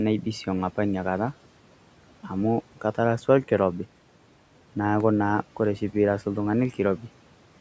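At 3.44 s the speech freezes for 40 ms. The waveform holds flat at a fixed level, so the sound stops without a click, then resumes softly at 3.48 s where it left off. This is an underrun with held sample: the output buffer ran dry while the converter held its last value.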